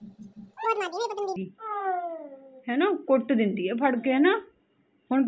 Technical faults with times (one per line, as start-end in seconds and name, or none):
0.00-1.36 wrong sample rate